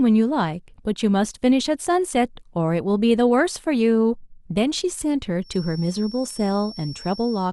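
From 5.40 s to the end, a feedback whistle at 5.4 kHz sits well below the speech, steady but slightly wavering, likely a loudspeaker-to-microphone loop held just short of runaway.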